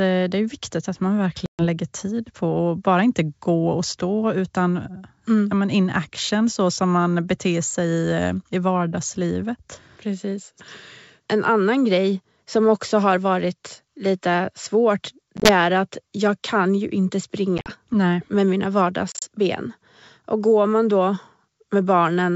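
Packet loss on an ADPCM call strikes at 1.46 s, a single 130 ms hole. Shorter scattered gaps follow at 15.37, 17.58 and 19.12 s. Each cuts hard to silence. The decoder's predictor then falls out of step, so speech returns with brief distortion.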